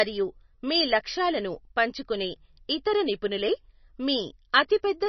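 From start to finish the speech carries heavy coding damage, most likely from MP3 compression at a very low bitrate, which fits something near 26 kbps. Nothing is present above 6 kHz, so sibilants sound dull and clipped. The encoder had too few bits for the detail, so weak frequency lines drop in and out between frames. That produces a watery, swirling texture, metallic chirps on s sounds, and smeared consonant onsets.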